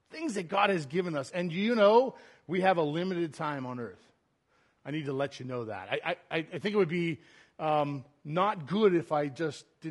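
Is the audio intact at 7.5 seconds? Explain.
No. At 7.5 seconds the speech carries audible damage that runs through the whole clip, so this moment is affected like every other. The sound is rough and grainy. Noise fills the gaps between the voice's harmonics. The top band sounds thin and synthetic. This points to low-delay AAC compression, likely AAC-ELD at a low rate near 32 kbps. Its short frames cannot resolve pitch harmonics cleanly, and too few bits remain for detail.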